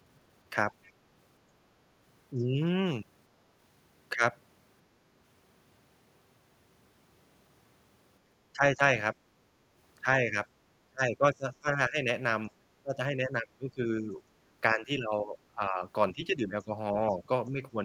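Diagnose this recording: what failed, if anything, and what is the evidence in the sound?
Faint scraps of a second voice surface at 0.83–0.91 s and 2.38–2.44 s, some 30 to 35 dB below the talker. This is the other side's voice leaking through, likely residual loudspeaker echo that the call-processing echo canceller failed to remove.

The talker's level sags at 2.34–2.47, 8.53–9.15, 10.28–10.36, 10.89–14.21 and 14.74–17.77 s, dipping by roughly 5 to 20 dB, deepest around 11–14 s. This is speech suppressed in double talk, likely the echo canceller attenuating everything while both sides spoke.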